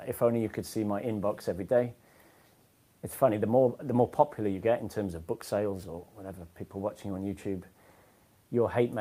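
No technical faults can be heard anywhere in this clip. There are no events in it to place on a timeline.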